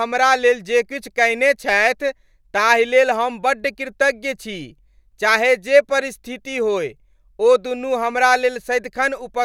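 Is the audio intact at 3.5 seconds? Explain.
Yes, at 3.5 seconds the audio is intact, with no dropout, click, distortion or other fault audible at that point in the speech.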